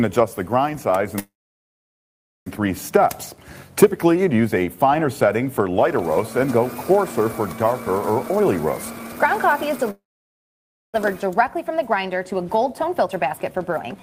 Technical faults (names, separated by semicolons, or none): call audio freeze; jitter buffer speed-up